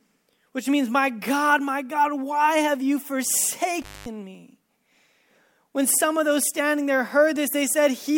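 A speech recording with an intermittent contact from 3.82 to 4.06 s: a loose cable or plug opens for about 217 ms, so the sound cuts out with crackle at both edges and faint hiss underneath, unlike the clean, silent gap of a digital dropout.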